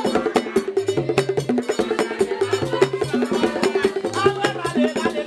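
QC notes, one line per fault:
2.43–5.07 s, train of clicks: roughly ten near-identical pops at about 4.2 per second, unevenly spaced and about as loud as the sound itself. Their matching shape and sustained run separate them from random crackle, likely from interference or a faulty connection or power supply.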